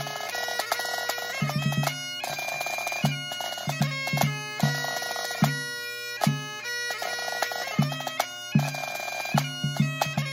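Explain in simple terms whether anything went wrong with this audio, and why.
From 2.33 to 4.45 s there's a faint, steady high-pitched whine: USB whine. A USB connection draws power in rapid, regular bursts, and that leaks into the audio as a fixed tone at 8 kHz, loudest at 16 kHz.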